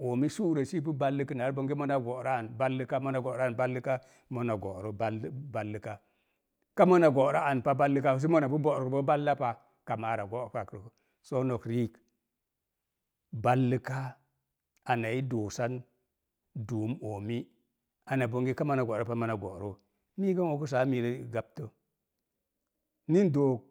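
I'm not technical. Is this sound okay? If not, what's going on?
Yes, nothing in this speech recording points to a technical fault.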